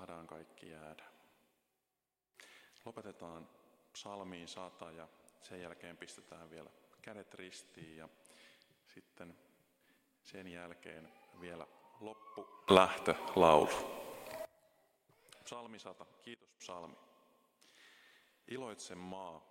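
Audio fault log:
12.68–14.45 s and 16.34–16.60 s, sudden gain jump: the level leaps up by about 24 dB for nearly two seconds, then later drops by about 18 dB for roughly a quarter second, with sound and background noise moving together and no fade at either edge. The likely cause is digital gain applied without a ramp. On the waveform the envelope steps abruptly; a spectrogram shows uniformly brighter, then darker, vertical bands with sharp edges.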